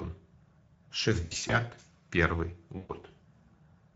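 Throughout the speech, a Speex codec starved of bits for the excitation signal leaves the voice plainly noisy and hoarse. The damage points to a mid-range setting of roughly 17 kbps.

From 1.25 to 1.58 s, VoIP packet loss concealed by the speech codec takes out about 160 ms of audio, scattered over 240 ms, with the longest gap 60 ms. The decoder stretches its last pitch and filter, so the voice smears into a fading buzzy tone or coloured noise and stays weak briefly after packets return. The same fault recurs from 2.77 to 2.91 s, where about 120 ms is lost and bridged the same way.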